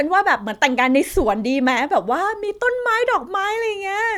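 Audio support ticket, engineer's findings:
No faults found on listening; no action required.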